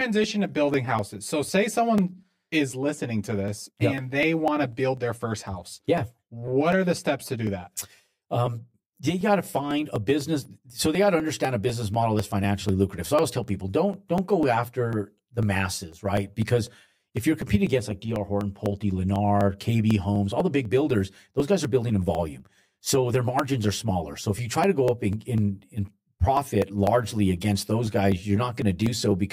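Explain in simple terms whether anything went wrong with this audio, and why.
Two things went wrong. The first is a channel delay, which causes comb filtering. One side of the recording arrives about 10 ms late. When both sides are mixed together, parts of the speech cancel. This leaves dips starting near 50 Hz and repeating evenly. The speech sounds hollow and phasey throughout.

The second is periodic USB or driver dropouts. From 0.24 s to 29.11 s, a tiny slice of sound, about 1 ms, is skipped every 0.25 s. That happens roughly a hundred times. You hear steady little ticks whenever someone is talking.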